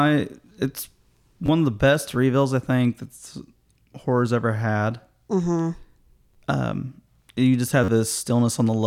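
At 1.46 to 1.48 s, just before "of the best reveals", at 6.34 to 6.36 s, and at 7.84 to 7.88 s, right after "you just", the speech catches in a repeated buffer. Fresh audio arrived late, so the same roughly 11 ms slice, which fits a 512-sample buffer, replayed two, two, then four extra times. The hard joins produce a brief buzzy stutter rather than a silent dropout, and about 20, 20 and 40 ms of real speech go missing.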